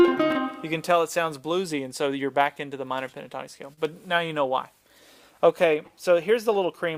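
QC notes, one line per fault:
3.73–3.80 s, short stall from a late packet: a packet arrived late and the jitter buffer ran dry, so the receiver stretched the preceding sound by about 39 ms and then resumed at the same point. Nothing is lost, but playback now runs about 39 ms later and the held sound carries a slight buzz or dip.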